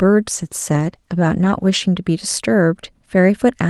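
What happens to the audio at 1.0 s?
A call bitrate drop runs from 0.37 to 1.87 s, covering 1.0 s. The encoder is forced to spend far fewer bits, so the speech is coded more coarsely and sounds rough and watery for about 1.4 s, consistent with a fall from roughly 48 to 14 kbps.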